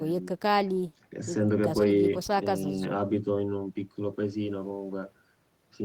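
No technical faults can be heard anywhere in this speech recording.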